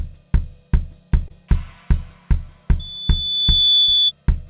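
Short concealed packet loss at 1.28 to 1.32 s: about 20 ms of audio arrived too late to decode, and the receiver bridged the gap by extending the preceding sound for roughly 14 ms before blending back, leaving a brief smear or wobble.

Loudspeaker feedback squeal from 2.79 to 4.12 s: the microphone is picking up its own loudspeaker, and at 3.5 kHz the loop gain exceeds one. The result is a single tone that swells over about a second to sit about 5 dB above the rest of the sound. Because nothing above 4 kHz survives, which fits a G.711 call path at 64 kbps, the squeal sits just under the top of the band.

While the squeal is still sounding, a second short concealed packet loss occurs at 3.83 to 3.90 s. About 40 ms is lost and is covered by roughly 43 ms of continued sound, a longer wobble than the first.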